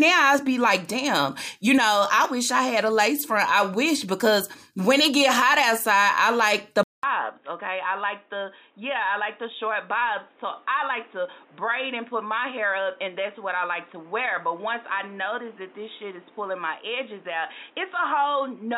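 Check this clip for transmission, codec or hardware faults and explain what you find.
One hardware fault is audible. From 6.83 s to the end, after a 200 ms silence, the sound turns dull and boxy with nothing above 3.8 kHz, drops a few dB and gains fresh background noise. The likely cause is the input switching to a poorer device, such as a headset's narrowband call profile. Unlike a codec bandwidth drop, it brings a new noise floor and level shift.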